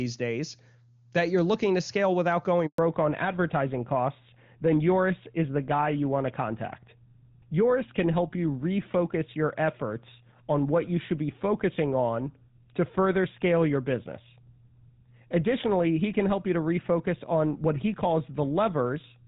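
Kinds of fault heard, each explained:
Handover gap: Right after "looking to scale without", the speech cuts out abruptly at about 2.66 s and stays silent for 120 ms before resuming at 2.78 s. That hole is the call being passed from one network link to another: while the switch happened, no speech frames reached the receiver, so there was nothing to decode. Whatever was said in that short window is gone, not just quieter.
Fallback to narrowband: From 2.78 s to the end, the speech loses its airy top and sounds boxed-in, muffled and gritty compared with the opening seconds. The call dropped out of HD Voice, AMR-WB at 23.85 kbit/s, where the start of the clip sounds clean, into the older GSM full-rate codec at 13 kbit/s. That codec carries nothing above 4 kHz, so sibilance and brightness are dulled and the coarser coding adds roughness.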